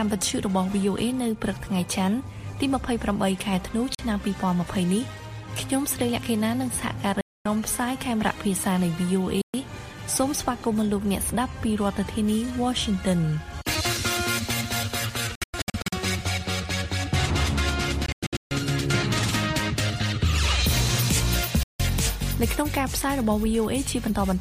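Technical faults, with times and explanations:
3.95–3.99 s, 7.21–7.46 s, 9.41–9.54 s, 15.35–15.93 s, 18.06–18.51 s, 21.63–21.80 s: Bluetooth dropouts. The sound cuts to silence for 40 ms to 240 ms, then resumes further on. At 15.35 and 18.06 s, short gaps cluster. Late wireless packets were likely discarded.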